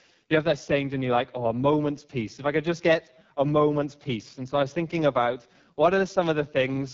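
From start to finish the speech carries AMR wideband (HD Voice) codec damage at heavy strength, with the sound pointing to the codec's lowest 6.6 kbit/s mode. The pulse-driven vocal tract model is starved of bits, so the voice turns rough and raspy, and nothing is present above 7.5 kHz.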